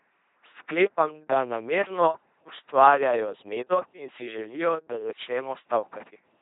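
Speech runs through an LPC-10 vocoder from start to finish, and the codec damage is heavy. The voice sounds buzzy and robotic. Each moment is rebuilt from either a pulse buzz or plain hiss, which fits a 2.4 kbit/s coder. Nothing remains above 3.8 kHz.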